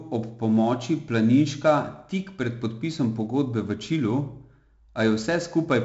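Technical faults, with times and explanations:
Throughout, 4-bit ADPCM compression: heavy gritty hiss rides on every loud part of the speech, onsets crunch, and nothing sounds above 7.7 kHz. Each sample is a coarse 4-bit step from a prediction, so error follows level and attacks outrun the step size. The dull top fits 64 kbps.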